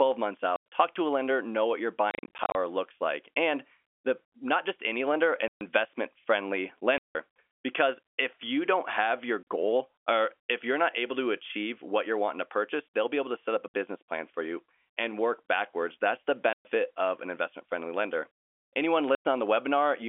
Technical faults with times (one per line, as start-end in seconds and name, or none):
0.56-0.64 packet loss filled with silence
2.11-2.55 packet loss filled with silence
5.48-5.61 packet loss filled with silence
6.98-7.15 packet loss filled with silence
9.43-9.45 packet loss filled with silence
13.68-13.74 packet loss filled with silence
16.53-16.65 packet loss filled with silence
19.15-19.25 packet loss filled with silence